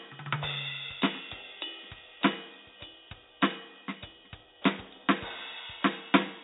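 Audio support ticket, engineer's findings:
Listened to the music clip and nothing stood out, so no faults to log on this one.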